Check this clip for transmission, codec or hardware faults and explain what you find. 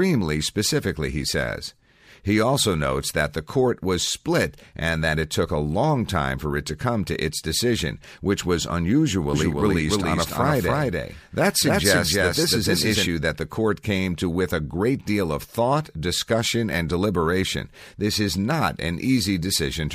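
One fault stands out, a doubled audio track from 9.34 to 13.06 s, ending just before "that the court came". Through that stretch the speech is heard twice at roughly equal loudness, the second copy trailing by roughly a third of a second, so syllables smear into a stuttering overlap. The echo carries no decay or room colour and cuts in and out abruptly. The likely cause is a second, slower capture path or an edit leaving two out-of-step copies mixed together.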